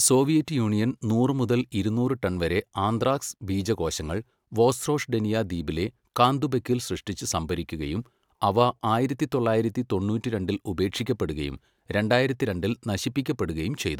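No technical faults can be heard anywhere in the speech.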